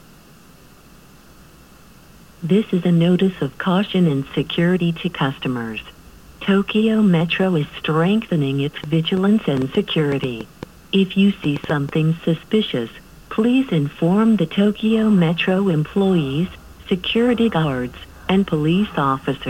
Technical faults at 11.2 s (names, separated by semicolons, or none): train of clicks